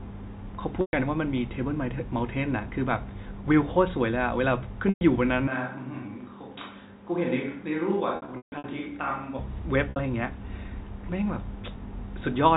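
Packet loss with pitch repetition at 0.81 s and 4.89 s: about 120 ms of audio was lost each time. The receiver bridged each gap by repeating the last pitch period, so the sound briefly holds on a slightly buzzy tone.

From 5.48 s to 9.38 s there is a switch to a distant microphone. The sound turns roomy and hollow at once, with thinner bass, and drops about 5 dB. Room noise sits roughly 35 dB below the speech. This is likely because the close microphone's signal failed. The change in and back is abrupt.

Within that stretch, from 8.16 s to 8.64 s, losses totalling 300 ms are scattered over 480 ms, with the longest run at 150 ms. That run is long enough for the repeated period to fade toward silence before the speech cross-fades back. A final 60 ms loss at 9.90 s gives another short, buzzy hold. Throughout, the telephone coding keeps everything below 4 kHz.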